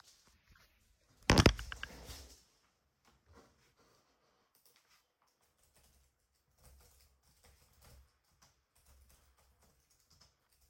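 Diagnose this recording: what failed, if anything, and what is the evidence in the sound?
Nothing failed at any stage of the chain, and there is no audible evidence of a defect anywhere in these sounds.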